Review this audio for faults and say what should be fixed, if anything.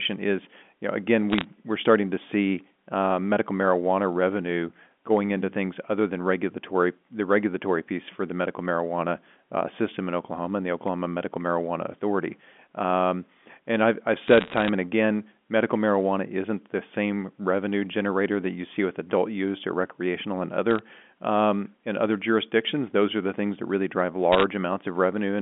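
Bit errors on a digital phone line cause crackle at 1.30–1.44 s, 14.28–14.69 s, 20.71–20.79 s and 24.32–24.44 s. Roughly one bit in a hundred or fewer flips. Each flip corrupts one sample, and a flip in a high bit or the sign of a loud sample ticks sharply. Prevent this with error-checked, cleaner digital links.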